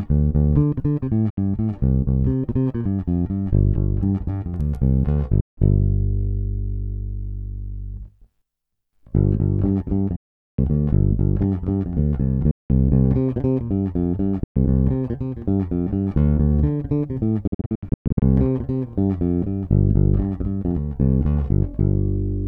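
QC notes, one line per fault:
1.30–18.22 s, Bluetooth dropout: the audio cuts to silence six times, at 1.30–1.38 s (about 70 ms), 5.41–5.58 s (about 160 ms), 10.16–10.59 s (about 420 ms), 12.51–12.70 s (about 190 ms), 14.44–14.56 s (about 120 ms), and 17.47–18.22 s. The last is a stutter of short gaps spread over about 740 ms, with about 460 ms missing in total and no single gap longer than about 120 ms. Each time the sound comes back further along, as though it had kept playing, which points to stretches of the wireless stream that likely arrived too late and were discarded. On a waveform these show as flat silent gaps with sharp or very briefly faded edges. On a spectrogram they appear as full-height blank vertical bands, and the 17.47 s event looks like a comb of narrow bands.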